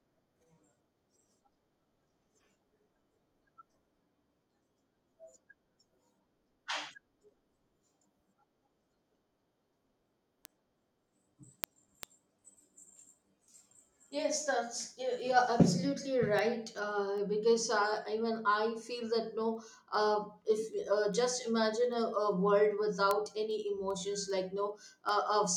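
Word clock ticks run through the speech from 0.17 s to 25.49 s, around seventy ticks spaced roughly 0.4 s apart. The receiver isn't locked to the sender's clock, and each slip drops or repeats one sample, which fits a mismatch of roughly 50 parts per million.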